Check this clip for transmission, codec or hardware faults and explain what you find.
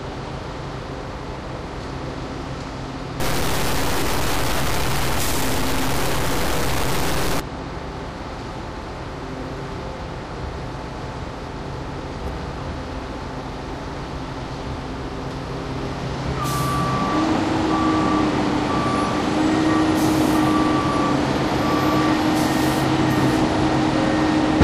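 One fault turns up, in the everyday sound from 3.2 to 7.40 s: grainy distortion, likely low bit depth without dither, which fits 4-bit truncation. The waveform shows coarse stair-steps, and the spectrogram shows broadband grit roughly as loud as the sound itself.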